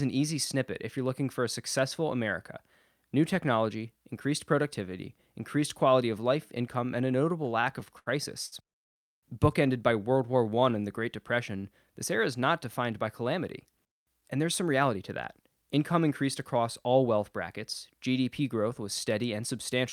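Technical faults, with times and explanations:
7.43–8.09 s, repeated stalls (stutter): just after "life income and a", the speech halts seven times in about two thirds of a second. Packets came in late, so the jitter buffer kept running dry, and each time the receiver held the last sound until data resumed. About 140 ms, roughly a fifth of the span, is filled this way. The longest hold lasts 73 ms, and nothing is lost. On a spectrogram the harmonics flatten into short horizontal smears. The waveform shows repeated, near-identical cycles, the longer holds tapering in level.
8.46 s, short stall from a late packet: one packet missed its playout time, and the receiver stretched the sound in progress for 57 ms until it turned up. Playback then continued from the same point, now 57 ms later, so nothing is skipped. A sound is held slightly too long. The spectrogram shows a brief stretch of frozen, unchanging harmonics. 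In the waveform a short run of copied pitch cycles fills the gap.
9.93–11.17 s, jitter buffer slow-down: with its reserve running low, the buffer rebuilt it by repeating single pitch periods and slivers of pause many times over. This adds about 149 ms across 1.24 s, so the speech plays at roughly 89% speed while the pitch stays the same. Sounds are drawn out. On a spectrogram syllables look horizontally stretched with pitch tracks unchanged. The waveform shows extra duplicated cycles.
13.23–15.78 s, jitter buffer speed-up: between "is not defined by" and "increased across all wealth", the buffer held more audio than its target, and the receiver trimmed short runs of one or a few pitch periods again and again. Around a fifth of a second is removed, so the speech runs about 7% fast at the same pitch and sounds slightly hurried. The spectrogram shows syllables compressed in time with harmonic spacing intact. 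The waveform has small, seamless splices where cycles were dropped.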